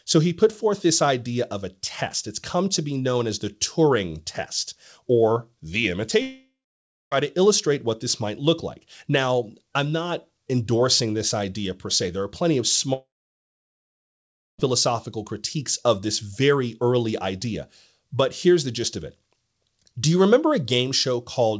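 At 6.22 s, after "test or the", the sound smears into a fading buzz, then falls silent for about 0.6 s until "to illustrate what this" at 7.13 s. From 12.93 to 14.60 s, after "are plenty of", the same happens with about 1.5 s of silence. This is likely a long network dropout. Unlike a brief, smoothly concealed glitch, concealment gives up and the lost audio never returns. The G.722 call path carries nothing above 8 kHz.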